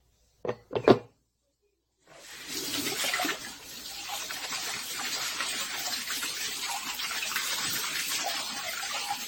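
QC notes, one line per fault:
Throughout: generation loss. The whole recording has a swirly, hollow smear, and attacks come out blurred and rounded, worse than a single 64 kbit/s-class AAC-LC encode would give you. Nothing makes it past about 16.6 kHz either. That's likely down to the audio being decoded and re-encoded around seven times, with each pass quantising on a shifted frame grid so the noise and spectral holes keep piling up.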